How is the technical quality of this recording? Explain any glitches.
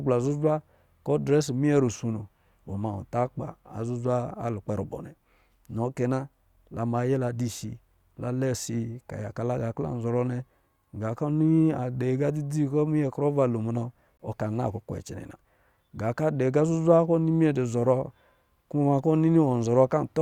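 One glitch stands out in the speech. At 14.17 to 14.20 s, between "lo munɔ" and "ɔ ka", there is a hard-edged 21 ms hole of silence. It is a gap between stream segments: two segments' time stamps don't meet, and the player fills the difference with silence without losing any audio.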